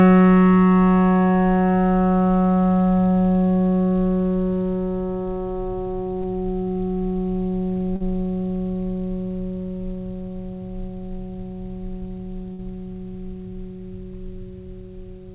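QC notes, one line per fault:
6.22–6.26 s and 7.96–8.02 s: short concealed packet loss. A brief slice of the music failed to reach the decoder in time, about 20 ms in the first case and about 40 ms in the second. The receiver filled each hole by extending the sound just before it, then blended back into the real signal. The result is a short smear or wobble in the music rather than a clean cut. The patch for the second event runs to 43 ms.
12.52–12.60 s: burst of packet loss. About 60 ms of audio went missing in one run, as packets that were lost or arrived too late to be played. The receiver carried the preceding sound forward and let it decay across the gap, so a held, fading continuation replaces the real music. Playback then picks up 60 ms further along, and the passage in between is gone. The concealed stretch sits within the call path's band limit of 4 kHz, which fits G.711 mu-law at 64 kbps.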